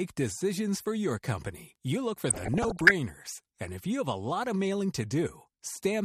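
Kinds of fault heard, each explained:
MP2 compression: The whole clip sounds dull and a bit gurgly, with a granular roughness on the speech and the top end fading in and out. That's likely MPEG Layer II running short of bits. It splits the signal into 32 sub-bands and, when starved, switches off the upper bands and coarsely quantises the rest. The amount of damage fits a rate of around 80 kbps.
Bit error spike: At about 1.76 s, right after "decisions for your company" and just before "you look for", there's a single sharp tick that has nothing to do with the speech. One bit in a sample got flipped, so the value leapt by a power of two and snapped straight back. That produces a click smeared across the whole spectrum. It sounds like just one corrupted sample.
DAB burbling: From about 2.29 to 2.91 s, after "company you look for", the audio burbles, with short blips of noise laid over the speech. 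This is what weak DAB reception does: bit errors slip past the error correction into the MP2 data, so wrong samples put noise blips in single sub-bands and wrong scale factors make sub-bands jump in level for up to a frame. It sounds like an error rate of around one percent hitting a run of 26 frames.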